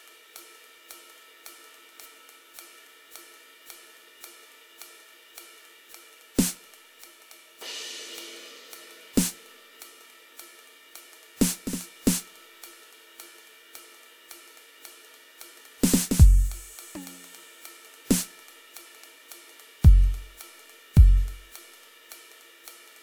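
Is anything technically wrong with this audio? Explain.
No, nothing in this music stood out as a technical problem on listening.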